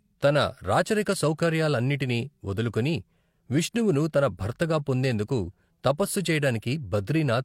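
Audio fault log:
No technical faults can be heard anywhere in the speech signal.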